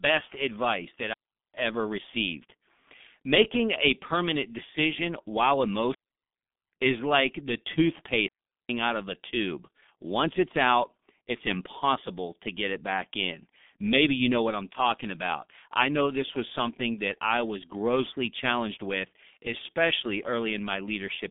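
From start to finish the speech carries heavy G.723.1 codec damage at 6.3 kbit/s. The line passes roughly 150 Hz to 3.6 kHz, with nothing above 3.7 kHz. Coarse 30 ms frames and a slowly updated voice model leave the speech muffled and hoarse, with smeared consonants.

Three digital wireless dropouts follow, at 1.14 to 1.54 s (about 400 ms), 5.94 to 6.72 s (770 ms) and 8.28 to 8.69 s (410 ms). In each, the link lost too much data and the receiver muted behind a very short fade, leaving clean near-silent holes with no noise burst on either side.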